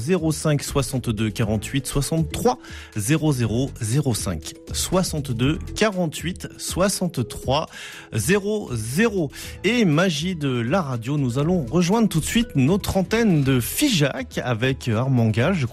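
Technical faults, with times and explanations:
Throughout: MP2 compression. The sound is dull and gurgling, with granular distortion. This is likely MPEG Layer II at around 80 kbps, dropping and coarsely quantising upper sub-bands.
3.68–3.80 s, 11.41–11.44 s, 14.59–14.67 s: DAB burbling. Short blips of noise appear in single sub-bands. Uncorrected bit errors corrupt samples in the MP2 audio data.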